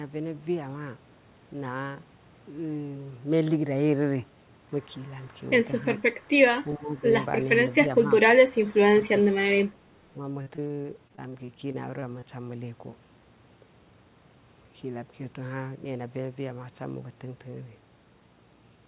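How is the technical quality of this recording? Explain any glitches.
The recording has two faults, both in the middle section, and the audio is band-limited to 4 kHz, which fits a narrowband telephone codec such as G.711.

Speech suppressed in double talk occurs at 5.98 to 6.03 s, 6.75 to 7.1 s, 7.63 to 8.32 s, 8.69 to 9.11 s and 10.06 to 10.17 s. The speech level dips by about 15 to 25 dB, likely because the echo canceller attenuated the talker while the far end was also active.

Repeated packet loss (robotic sound) runs from 10.42 to 12.24 s. A rapid series of short gaps, the longest about 40 ms, is patched by extending the preceding audio. About 16% of that span is concealed, so the sound turns choppy with pieces missing.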